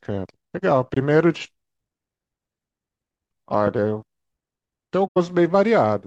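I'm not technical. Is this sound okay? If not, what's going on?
No. Twice the speech is briefly damaged: once from 0.94 to 0.97 s, and a longer stretch from 5.05 to 5.17 s. This is a corrupt frame concealed. A few small chunks of the compressed audio were damaged, and the player, rather than letting out a harsh squeak, quietly papered over each damaged chunk. The first spot suggests about two chunks were hit, the second about five.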